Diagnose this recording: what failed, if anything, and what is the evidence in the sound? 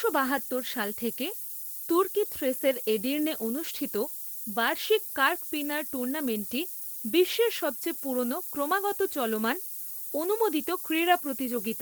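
Sample-format conversion failed: the audio was requantised to very low resolution, consistent with about 6 bits, with noise shaping. Across the whole recording, a steady, thin hiss sits nearly as loud as the speech itself and grows sharply brighter toward the top of the band. With so few levels, each sample's rounding error is large. The shaping filter feeds that error back so most of it lands in the high frequencies rather than spreading evenly.

The codec stage adds a second, separate fault: Opus voice compression in hybrid mode is plainly audible throughout. Speech comes through muffled and slightly hoarse, with a faint robotic edge. That sound fits a low rate near 16 kbps. In hybrid mode, the SILK linear-prediction coder handles the band below 8 kHz and a CELT layer covers the range above it. Content still reaches about 20.1 kHz, so the codec kept the full band rather than narrowing it. 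At this rate, the excitation is coded coarsely in 20 ms frames, which produces the hoarse, synthetic texture.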